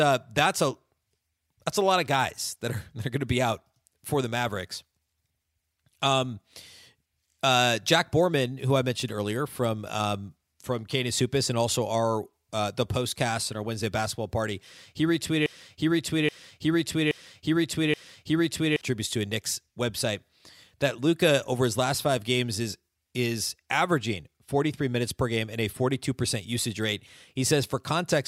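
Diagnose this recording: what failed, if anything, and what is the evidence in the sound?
A broken-record loop runs from 15.46 s to 18.81 s, just after "basketball party he": a 0.83 s fragment repeats exactly, back to back, four times before "to a". The likely cause is a playback or stream stall re-sending its last buffered fragment, so the intervening audio is lost.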